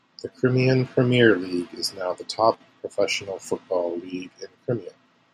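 At 2.54 s the speech drops abruptly by about 6 dB and stays low until 2.60 s, a brief dip of roughly 60 ms before the level snaps back. The likely cause is one channel dropping out: with one stereo side gone, the mono sum keeps only half of the shared signal. On a waveform this is a sharp-edged notch in the envelope; a spectrogram shows a thin vertical band dimmed evenly across all frequencies.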